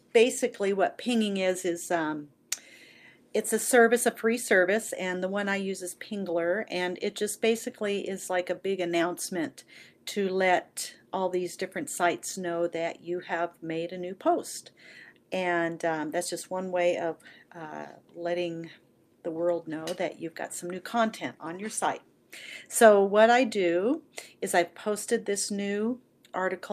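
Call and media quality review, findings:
No faults found on this listen.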